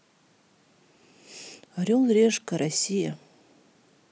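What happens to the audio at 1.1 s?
Nothing goes wrong at 1.1 s; the speech carries on intact through that moment, with no dropout, click or distortion to be heard.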